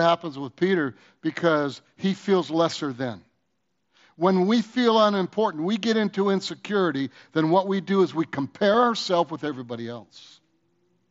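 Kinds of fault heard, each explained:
Concealed Bluetooth headset packet loss: at 8.73 s a 7.5 ms stretch of audio failed to arrive between the headset and phone over the wideband mSBC link, which fits a single lost frame. The receiver patched the gap with a copy of the closely matching waveform just before it, so it is nearly hidden.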